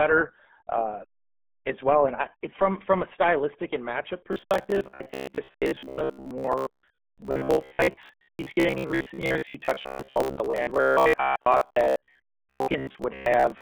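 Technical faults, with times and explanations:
Throughout, RealAudio 14.4 codec: the speech sits in a narrow telephone-like band of roughly 200 Hz to 3.5 kHz, with nothing above 4 kHz. Heavy coding damage leaves it muffled and gargly, which fits an 8 kbit/s dial-up speech codec.
4.33 to 13.61 s, robotic sound from repeated short buffers: right after "a stylistic and matchup" the speech becomes a rigid metallic buzz near 66.7 Hz. It likely comes from 15 ms fragments being replayed in place of most of the real audio, imposing that fixed pitch.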